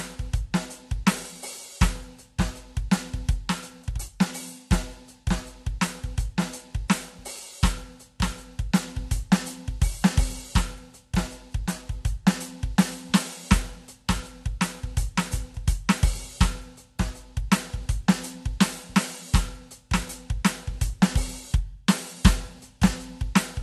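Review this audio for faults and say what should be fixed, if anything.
Transcoding between lossy codecs, likely MP3 re-encoded as low-rate AAC-LC, leaves the music with nothing above 12.1 kHz throughout and both codecs' artefacts heard together. To prevent it, encode once from the lossless original at an adequate bitrate instead of re-encoding an already compressed file.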